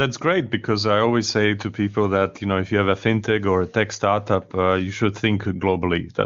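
No technical faults are audible anywhere in the speech.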